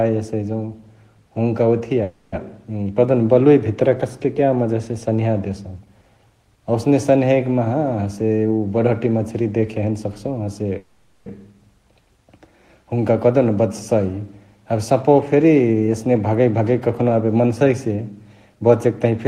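At 2.03–2.35 s and 10.78–11.29 s, the speech stalls into a fading buzz or hiss, then resumes where it stopped: a call audio freeze, likely from delayed packets emptying the jitter buffer. Jitter buffer speed-up runs at 8.06–10.73 s (110%) and 14.72–19.27 s (107%), trimming roughly 0.3 s each time, so the speech sounds hurried at unchanged pitch.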